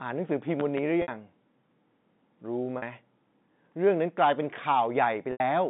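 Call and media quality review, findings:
Loud pop, 0.60 to 0.80 s. Two sharp pops in quick succession, around 10 dB above the speech, which continues underneath. Likely a voltage step from a plug, switch, static discharge or driver glitch, shaped by downstream circuits.

Separate issue from the network path. Not codec related.

Packet loss with pitch repetition, 1.02 s. 60 ms gap, consistent with three lost 20 ms packets. Receiver concealment repeats the last pitch period. Repeat fades out, speech returns via a short cross-fade.

Packet loss with pitch repetition, 2.78 s. 40 ms gap, fits two lost packets. Held, buzzy repeat.

Packet loss with pitch repetition, 5.32 s. 80 ms gap, fits four lost packets. Repeat fades out, speech returns via a short cross-fade.

G.711 A-law path, sound limited to about 150 Hz to 3.7 kHz, consistent with a 64 kbps line.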